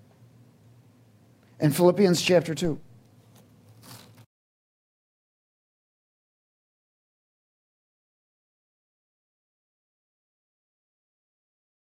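At 2.65 s a DC step shifts the waveform's zero line by about -29 dBFS, heard as a low thump; the offset then decays away through a 2 Hz high-pass.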